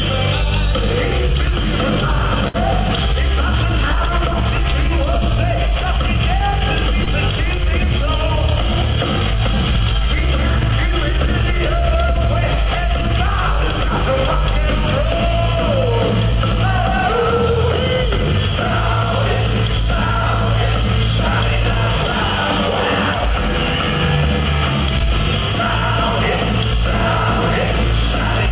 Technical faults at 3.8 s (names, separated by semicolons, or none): none